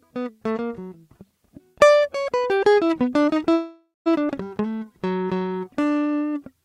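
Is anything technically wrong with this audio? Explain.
Yes, this music clip has three network-related faults.

Call audio freeze, 3.53 to 4.08 s: the music stops and the last sound is held as a fading tail, ending in about 170 ms of silence. The likely cause is delayed packets that emptied the jitter buffer. Playback then resumes where it stopped, so nothing is lost.

Skip ahead, 4.36 to 4.39 s: roughly a third of a second of music is dropped. The audio jumps forward, and the two sides are joined by an 11 ms fill.

Jitter buffer slow-down, 4.61 to 6.09 s: to rebuild its reserve, the receiver repeats tiny pitch-period slices. This adds 255 ms, so the music plays at 83% speed with the same pitch and sounds drawn out.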